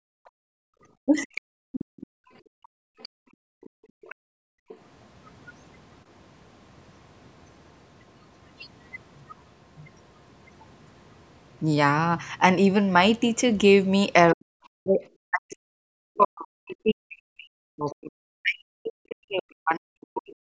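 From 0.31 to 4.68 s, the echo canceller's suppressor clamps the microphone while the loudspeaker plays: background gated by the echo canceller, with room sound dipping by up to about 39 dB for roughly three seconds in total.

From 1.05 to 1.35 s, the canceller likely misreads both talkers as echo: speech suppressed in double talk, with the voice dipping by roughly 35 dB in brief bites.

At 1.36 to 2.07 s and 3.02 to 4.77 s, residual echo likely escapes cancellation: the other side's voice leaking through, at roughly 15 dB and then 25 dB below the talker.

At 10.60 to 10.65 s and 14.29 to 14.33 s, the same other side's voice leaks through as tiny scraps, about 40 dB down.

From 14.33 s to the end, the suppressor likely clamps during double talk again, so speech suppressed in double talk cuts the talker in pieces, dipping by roughly 40 dB for around five seconds in total.

Within that stretch, at 17.86 to 17.95 s, another brief leak of the other side's voice surfaces roughly 30 dB below the talker. 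Throughout, the call's microphone processing leaves nothing above 8 kHz.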